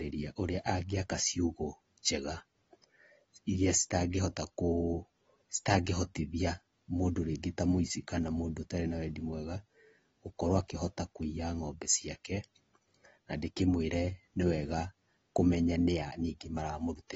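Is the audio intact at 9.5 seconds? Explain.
No. At 9.5 seconds, as across the whole clip, the speech carries plainly audible damage, likely from AAC compression. Nothing comes through above about 7.6 kHz, so it sounds dull, and sibilants and sustained sounds pick up a smeared, warbly fizz. That fits AAC-LC squeezed to a low bitrate, somewhere around 24 kbps. At that rate the encoder drops the top of the spectrum and quantises the rest coarsely against its hearing model.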